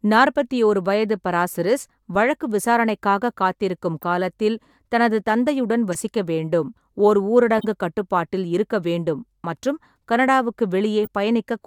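Compressed frames in this speech arrived with flipped bits and the decoder played them anyway, so a corrupt frame decoded each time: at 2.15 s, after "நாற்பத்தி ஓரு வயது பராசிரிஸ்", then 4.02–4.04, 5.92–5.95, 7.58–7.65 and 11.04–11.08 s. Each brief chirp or noise burst peaks around -20 to -15 dBFS.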